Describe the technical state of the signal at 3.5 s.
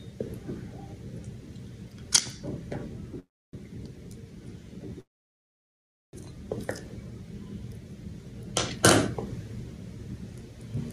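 At 3.5 s you're inside a call audio freeze running from about 3.19 to 3.55 s. The last bit of sound gets stretched into a short fading buzz or hiss, then drops to silence for roughly 0.28 s of the gap. When the audio resumes it picks up right where it left off, so nothing's lost, but everything after lands about 0.34 s later. The likely cause is packets stalling in transit until the jitter buffer ran dry.

There's also gain pumping underneath, present across the whole clip. The gain gets pulled down whenever something loud comes through, with the level swinging by around 5 dB. That leaves the dynamics flattened and a bit squashed. It's likely the input gain is cranked well past what the microphone needs, with a fast limiter or compressor clamping down on every peak.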